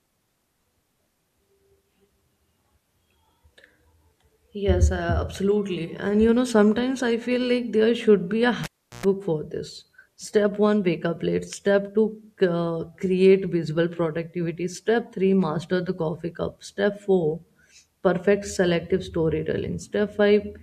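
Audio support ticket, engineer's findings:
Cable pulled and plugged in, 8.64–9.06 s, after "there should be a". Pop at cable removal. Then near silence, about 370 ms, signal path open. Burst of 60 Hz mains buzz, about 111 ms, plug tip touching before full seating; ungrounded conductor picks up hum. Second pop on reconnection. Speech resumes at "for this". Probable component: input cable or jack. Check connector seating, cable strain relief.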